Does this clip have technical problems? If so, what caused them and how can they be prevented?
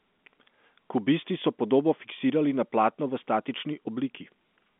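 No, nothing here counts as a technical problem; the sound is simply carried over G.711 A-law telephone coding, which is why nothing above about 3.7 kHz comes through.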